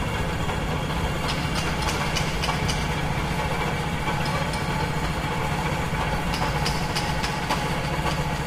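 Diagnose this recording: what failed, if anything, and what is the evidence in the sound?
Nothing here has gone wrong that I can hear, so the recording needs no diagnosis and there's nothing to chase.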